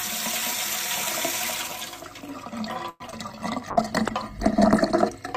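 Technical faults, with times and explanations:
2.89–3.02 s, call audio freeze: sound stretches into a fading buzz for about 0.11 s, ending in brief silence; likely packets delayed and the jitter buffer ran dry, inserting a gap.
3.06 and 3.11 s, short concealed packet loss: brief smears as about 20 ms each went missing, the receiver extrapolating the preceding sound to cover the hole.
3.72–5.12 s, call bitrate drop: sound turns rough and muffled as the encoder falls from 64 to 16 kbps for about 1.3 s, coding coarsely.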